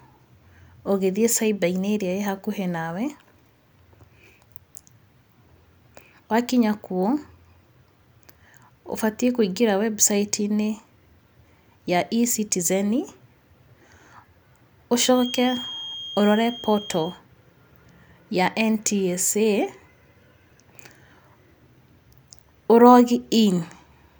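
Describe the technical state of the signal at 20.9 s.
At 20.9 s the signal is intact, with no dropout, distortion, glitch or other audible fault.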